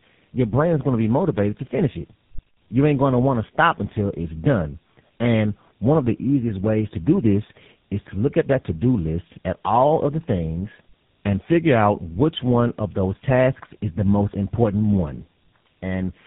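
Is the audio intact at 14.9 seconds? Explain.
No. At 14.9 s, as across the whole clip, the speech shows tandem speech coding. It passed through two speech codecs in a row, from AMR-NB via G.711 into GSM full rate, each re-encoding the other's damage. Unlike a single narrowband codec, roughness and warble compound, with nothing above 3.8 kHz.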